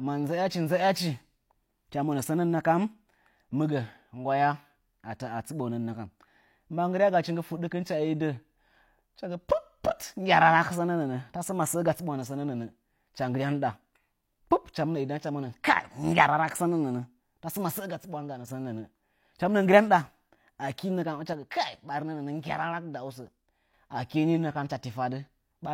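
From 17.80 to 18.48 s and 21.33 to 23.73 s, the speech abruptly falls about 6 dB, then recovers. One channel likely drops out.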